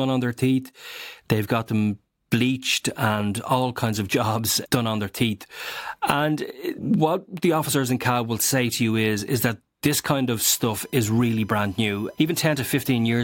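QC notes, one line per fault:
10.43–13.18 s: USB whine. A faint, steady 1 kHz tone sits well below the speech. Current drawn in 1 ms bus frames leaks through power or ground.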